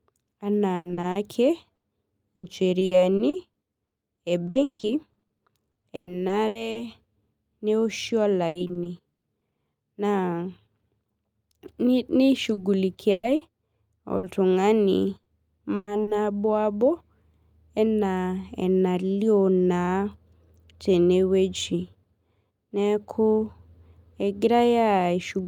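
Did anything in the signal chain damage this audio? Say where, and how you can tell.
Yes, at the network stage: repeated packet loss (robotic sound) from 0.75 to 6.77 s, 8.47 to 9.43 s and 12.53 to 16.09 s. Lost packets left holes of up to 160 ms, each filled by extending the preceding sound, so the speech turns choppy.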